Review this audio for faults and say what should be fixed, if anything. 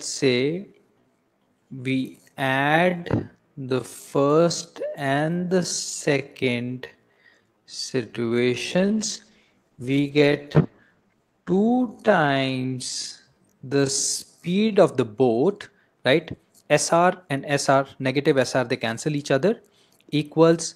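A time-stretched section runs from 0.0 to 14.74 s: the audio plays at roughly half speed (0.51×) with unchanged pitch, sounding like it drags, likely from software repeating short pieces to lengthen it. A spectrogram shows stretched, doubled-looking onsets. Stretching should happen before export, with a better algorithm, or not at all.

A call bitrate drop spans 8.7 to 13.43 s: the sound turns rough and watery, and the top end falls from 20 kHz to 12 kHz, fitting an encoder cut from about 40 to 15 kbps. The spectrogram shows a flat ceiling at 12 kHz. Setting a higher minimum bitrate would prevent it.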